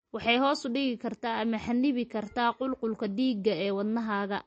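From start to finish the speech carries plainly audible damage of the kind MP3 compression leaves, likely from an encoder starved of bits, fitting a rate around 35 kbps. The treble stops dead at 8.4 kHz, so s sounds lose their edge, and weak detail flickers in and out, giving a watery, swirly texture. On a spectrogram there is a hard ceiling at 8.4 kHz, with isolated patches blinking on and off beneath it.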